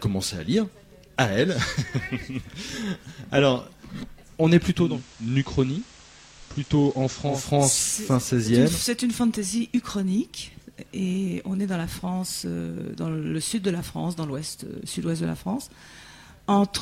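From 4.73 s to 7.51 s, the digital radio is blending to analogue: the receiver loses the digital stream and cross-fades over about 285 ms to the station's FM signal, then returns. The audio drops about 4 dB, and hiss appears roughly 20 dB down. Unlike a codec bandwidth switch, this brings broadband hiss and a smooth fade in and out.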